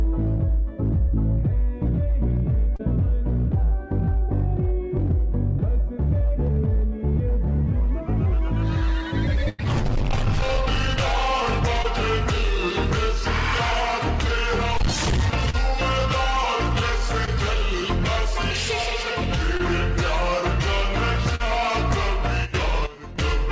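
Audio carried over a WebRTC-style call path, with nothing above 8 kHz, which fits a wideband G.722 codec. It shows short concealed packet loss at 2.76–2.81, 11.82–11.86, 15.50–15.55, 17.25–17.29, 19.57–19.61 and 21.35–21.42 s, where the decoder patched 20–40 ms gaps by extending the preceding sound, leaving brief smears or wobbles. A burst of packet loss at 9.49–9.60 s drops about 100 ms. Concealment stretches the last sound into a decaying buzz or hiss before the audio resumes with that stretch missing.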